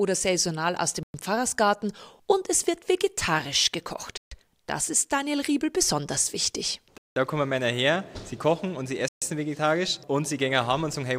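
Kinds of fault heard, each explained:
Bluetooth stall: The sound drops abruptly to full silence four times and then resumes: at 1.03 s for 0.11 s, 4.17 s for 0.14 s, 6.98 s for 0.18 s, and 9.08 s for 0.13 s. The clean, complete gaps point to playback pausing rather than a signal fault. The likely cause is radio interference delaying packets until the receiving buffer emptied, with output halting until the retransmitted data arrived.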